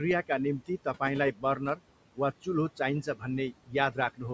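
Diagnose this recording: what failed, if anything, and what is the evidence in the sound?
Noise suppressor artifacts run through the whole clip, a fault in the call processing stage. The room noise, sitting about 17 dB below the speech, is pulled down by about 18 dB in the gaps and then rises again under each phrase. The suppressor estimates the steady noise and attenuates those bands frame by frame. With a cut that deep, the noise gain keeps switching between pauses and speech.

Speech cut by the noise suppressor occurs at 1.32–1.81 s, 3.03–3.24 s and 3.52–3.75 s, also in call processing. Within these spans, brief stretches of speech dip by about 15 dB in the first two and about 18 dB in the third, so the quieter parts sound swallowed. Only a fraction of each span is hit, roughly a fifth of a second in the first and less in the others. The suppressor mistook low-level speech energy for noise and turned it down with the background.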